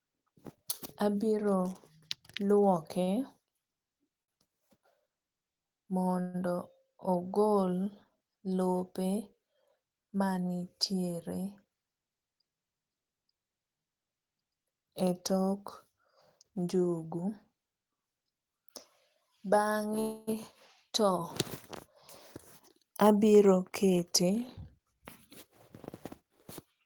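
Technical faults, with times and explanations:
3.03 to 3.09 s and 4.23 to 4.34 s: short stall from a late packet. A packet arrived late and the jitter buffer ran dry. The receiver held the last sound to cover the wait, 38 ms the first time and 49 ms the second. That is why a sound lingers too long with a faint buzz. Playback then picked up from the same point, so nothing is lost. Everything after is delayed by the held time.
6.21 to 6.36 s and 20.00 to 20.29 s: call audio freeze. The audio stops moving forward, and the last sound carries on as a fading buzz. It never drops to silence. The gap is 128 ms the first time and 274 ms the second. The likely cause is packets held up in transit, draining the jitter buffer. The audio then resumes where it stopped, adding delay rather than losing content.
11.31 to 11.66 s and 22.75 to 25.47 s: jitter buffer speed-up. The buffer had built up extra audio, so the receiver trimmed tiny pitch-period slices over and over to shrink it. 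The pitch stays the same, but the speech runs fast. It plays at 109 percent in the short stretch, cutting about 40 ms. In the longer stretch it plays at 107 percent, cutting about 200 ms. It sounds hurried.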